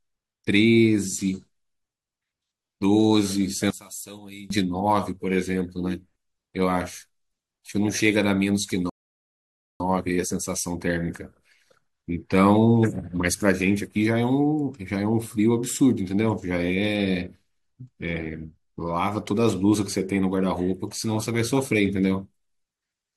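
From 3.70 to 4.50 s, one stereo channel has likely been inverted, so summing cancels the shared centre and the speech drops by about 18 dB to a faint trace. At 8.90 s a rebuffering stall occurs: playback runs out of buffered audio, falls silent, and resumes at 9.80 s exactly where it stopped, adding about 0.91 s.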